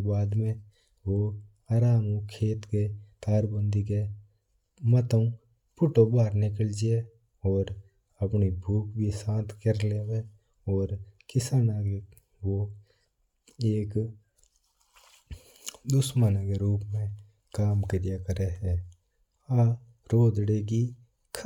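Nothing in this recording of speech stands out as a technical fault, so there's nothing to flag here.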